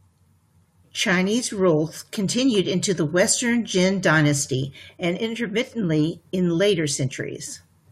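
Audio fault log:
Nothing to flag here, just speech coming through with no faults to log.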